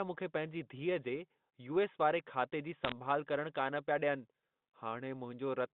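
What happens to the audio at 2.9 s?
A burst of bit errors on a digital phone line hits the audio from 2.85 to 2.92 s, right after "वारे बैंक खाते जी" and before "करणु कान पिया डि॒यनि". A few bits in every thousand are flipped on the G.711 line. Each flipped bit corrupts a single sample. Where a sign or high-order bit is hit, the sample jumps sharply. The result is a short cluster of sharp ticks, a brief crackle over the speech, within the narrow telephone band.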